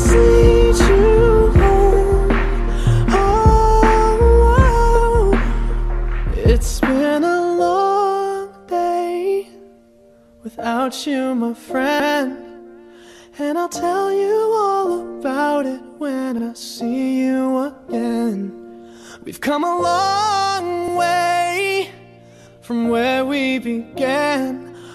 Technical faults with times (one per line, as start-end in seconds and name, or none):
2.95-2.98 repeated frames
11.99-12.15 repeated frames
16.38-16.43 repeated frames
20.87-20.93 repeated frames